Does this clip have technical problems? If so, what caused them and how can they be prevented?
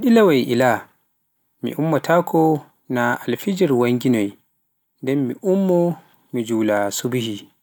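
No, nothing in this speech recording stands out as a technical fault, so there is no cause to trace and nothing to prevent.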